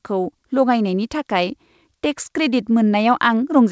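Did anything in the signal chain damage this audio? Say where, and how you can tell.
No, nothing in the signal chain has damaged this speech. It has come through a call path whose content stops at 8 kHz, which fits a wideband codec such as G.722.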